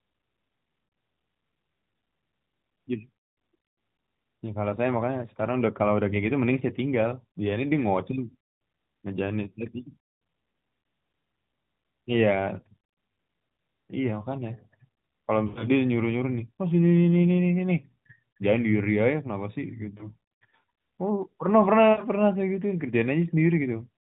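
At 15.48 to 15.68 s, about 80 ms of speech goes missing. These are lost AMR speech frames. Radio errors corrupted the frames, so the decoder reused the last good pitch and vocal tract settings at falling gain. The sound stretches, then fades out. At 19.98 s a single 20 ms loss gives a brief warble. At 21.92 to 22.02 s, about 60 ms drags and dims before the voice returns roughened. The narrowband band limit stays audible throughout.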